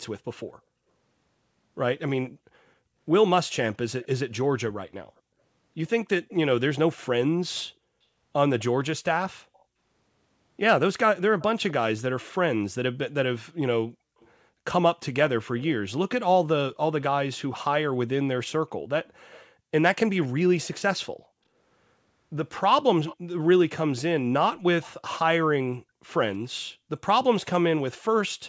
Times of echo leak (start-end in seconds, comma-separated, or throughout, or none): 2.26-2.30, 4.02-6.34, 8.59-9.64, 11.18-12.33, 14.20-16.76, 19.05-20.28, 23.07-26.13